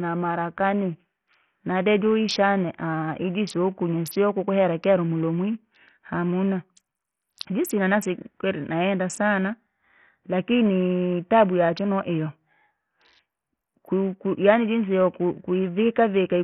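Throughout the speech, the treble thins and flickers while a gritty, coarse noise rides on every syllable, with aliasing. On a spectrogram the upper bands blink on and off in blocks. This is likely heavy Bluetooth SBC compression, consistent with a starved bit pool near 48 kbps.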